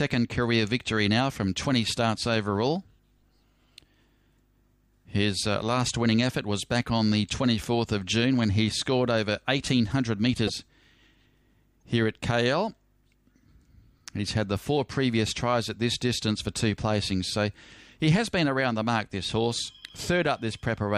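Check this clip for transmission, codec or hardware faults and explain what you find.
The audio has two brief codec glitches. At 10.46 to 10.50 s and 11.80 to 11.82 s it skips forward with a short chirp, noise burst or hole, likely a broken MP3 bit reservoir: after lost frames, the next roughly 26 ms frame decodes another frame's borrowed bytes.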